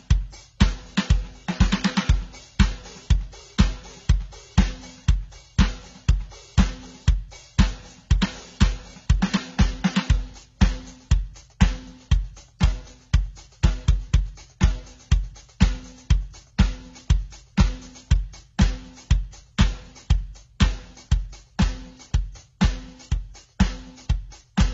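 From start to finish the music has nothing above 7.7 kHz, and it carries two kinds of damage at once: smeared, swirly highs alongside a grainy, watery texture that shifts over time. That mix is likely transcoding between lossy codecs, a chain of low-bitrate AAC-family encoders that fits an AAC-LC to HE-AAC to AAC-LC path. A single low-bitrate encode gives one consistent artefact character. Here the layered, mismatched artefacts show that each later stage re-encoded the earlier damage.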